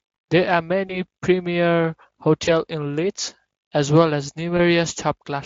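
At 0.87 to 0.99 s, 2.45 to 2.49 s, and just after "as well as" at 4.57 to 4.60 s, VoIP packet loss concealed by the speech codec is heard. Each gap is about 20 ms, which points to one lost frame. The decoder extends the previous sound, so it briefly goes buzzy or noisy and weak before recovering.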